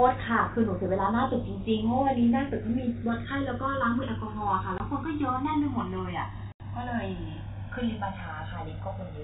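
Speech, carried over G.711 telephone coding with nothing audible above 4 kHz. The channels are drifting apart throughout. Their clocks differ by roughly 150 parts per million, so the inter-channel delay grows to about 1.5 ms, heard as slow flanging in mono. There is also packet loss filled with silence. A 20 ms hole sits at 4.78 to 4.80 s, and an 80 ms hole at 6.52 to 6.60 s, which fits four lost 20 ms packets. Both gaps have hard edges.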